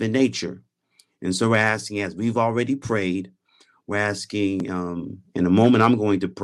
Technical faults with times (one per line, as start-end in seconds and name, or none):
1.54-1.69 microphone overload
1.62 microphone volume stepped down
5.63-5.87 microphone overload
5.70 microphone volume stepped down